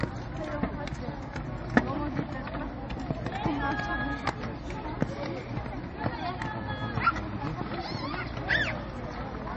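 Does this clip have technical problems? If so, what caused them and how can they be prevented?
Yes. Throughout, the audio was likely squeezed by MP3 compression at a very low bitrate, which fits about 32 kbps: nothing is left above 8.3 kHz, and the sound turns plainly watery and swirly. Encoding at a higher bitrate, or keeping a lossless copy, prevents this.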